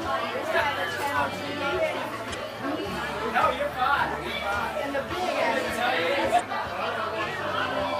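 A brief glitch cuts through the sound from 2.32 to 2.36 s, and a second, similar one follows from 6.36 to 6.41 s, each lasting only about 40 ms. Both are damaged data in a compressed stream: a short stretch of the encoded bytes was corrupted, so the decoder misread those frames and lost its place in the bitstream while hunting for the next valid frame header to resume normal decoding.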